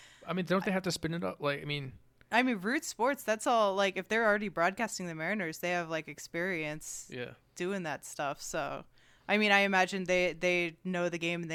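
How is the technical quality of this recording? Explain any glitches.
Nothing here calls for explanation, since the recording runs without any glitches at all.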